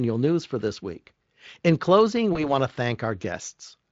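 VoIP packet loss concealed by the speech codec, 2.33 to 2.53 s: a 20 ms gap, which fits one lost frame, is rebuilt from the preceding sound and comes out briefly as a buzzy tone or coloured noise that fades, then thin until the Speex decoder recovers.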